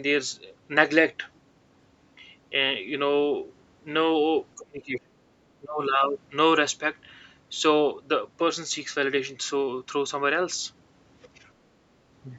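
Speech suppressed in double talk occurs at 4.54 to 5.20 s and again at 5.61 to 5.83 s. The voice sinks sharply, by roughly 30 dB and then about 20 dB, likely because an echo canceller mistook overlapping talk for its own echo.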